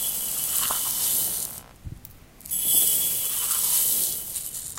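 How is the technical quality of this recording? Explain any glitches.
The recording has one glitch, and it sits right at the start. From 0.0 to about 3.17 s there's computer activity noise: a buzzy, chirping pulse around 70 Hz, roughly 30 dB below the sound. It comes from processor or graphics load shifting the shared ground under the audio circuit, so it tracks the machine's activity rather than the sound itself.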